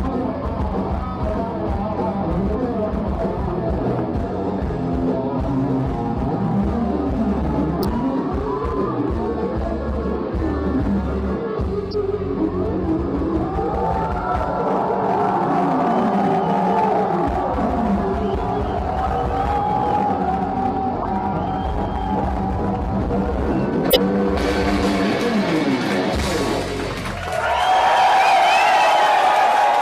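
Five corrupt frame decoded bursts chirp through the audio at 7.80, 11.91, 14.28, 21.02 and 23.90 s. Flipped bits put energy at wrong frequencies across a few frames each. Unlike a dropout's silence, these add squeaky noise, nearly full-scale at 7.80 and 23.90 s.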